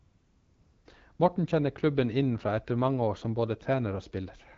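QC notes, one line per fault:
0.00 to 0.85 s, AMR comfort noise: the opening is steady, smooth hiss instead of the real room. The phone decided nobody was talking and sent no speech frames for 854 ms, so the receiver made up noise from a rough level-and-spectrum sketch. The noise drops out abruptly when speech frames resume.
1.15 to 1.19 s, AMR comfort noise: a brief 40 ms gap where the same synthetic fill briefly replaces the real background. The wideband codec carries the speech on either side at 12.65 kbit/s with only light coding texture.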